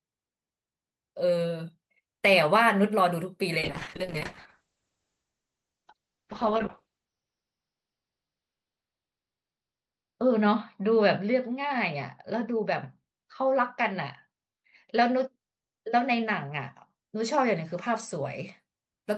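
At 3.59 s a call bitrate drop sets in and lasts until 18.65 s. The speech loses its top end, with the bandwidth falling from about 20 kHz to 6 kHz, and turns rough and watery as the encoder codes more coarsely. The change points to a fall from roughly 40 to 7 kbps, with the worst stretch lasting about 5 s. Unlike a plain low-pass filter, the coding grain gets audibly worse too, and unlike packet loss there are no gaps.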